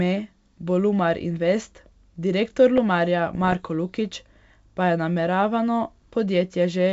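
A block of digital silence at 2.78 s lasts about 2.4 ms: a run of samples dropped to silence with no fade in or out. The abrupt cut and return, far too short to register as silence, are heard here as a tick or dip in the speech.

Bit errors on an ADPCM link run from 3.35 to 3.65 s, at a rate of roughly a few tenths of a percent. On this G.722 wideband path, each flipped bit throws off the decoder's step size and prediction, so the damage rings on briefly. It comes out as pops and rough, gritty bursts with brief jumps in level.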